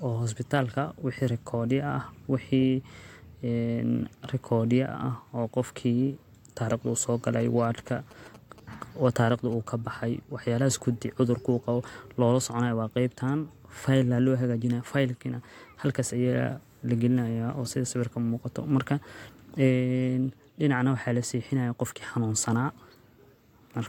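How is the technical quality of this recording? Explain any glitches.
There's one glitch: GSM signalling bursts from 7.40 to 9.69 s. A nearby 2G phone was handshaking, and the audio circuitry rectified its radio bursts into a galloping dit-dit-dit of short 217 Hz buzzes, sitting roughly 20 dB under the speech.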